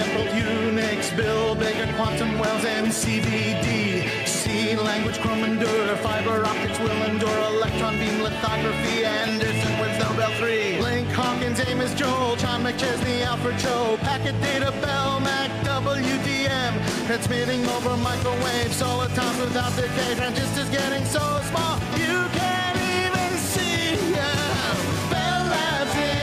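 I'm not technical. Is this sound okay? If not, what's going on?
Yes, nothing wrong here: no dropouts, glitches or distortion anywhere in the recording.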